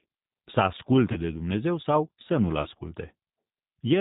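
From start to end, the speech is coded with G.729, the Annex A variant at 8 kbit/s. The codec models each 10 ms frame as a vocal tract filter, a pitch predictor and a few pulses. It discards everything above 4 kHz, so the sound is narrow and muffled. The damage is plainly audible. Voices come out rough and somewhat synthetic.

At 1.12 s there is VoIP packet loss concealed by the speech codec. It lasts until 1.22 s. The gap fits about 30 ms of missing audio, one lost packet. The decoder repeats its last pitch and filter while lowering the gain. That smears the sound into a fading buzzy tone or coloured noise. Recovery lags, because each frame depends on the previous one.

The same concealment returns from 2.62 s to 2.68 s. It again points to one lost 30 ms packet. The sound stretches into a brief, weakening tone or noise before normal decoding resumes.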